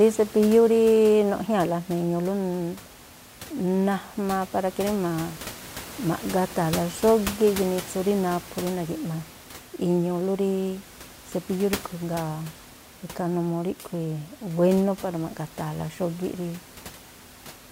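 No technical faults can be heard in this recording.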